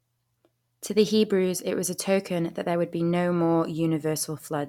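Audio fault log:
No technical faults can be heard anywhere in this speech recording, and the signal holds steady from its opening to its close.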